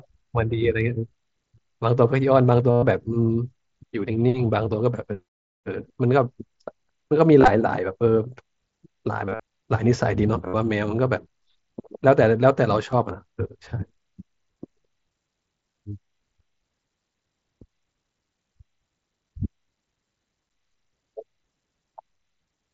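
Speech heard through a wideband mSBC Bluetooth headset link, with concealed Bluetooth headset packet loss at 2.71–2.83 s, 7.41–7.51 s, 9.26–9.40 s, 10.47–10.54 s and 12.92 s. The receiver filled missing packets by repeating recent waveform, so the longer runs become a level buzzy tone, not the silent gap of a plain dropout.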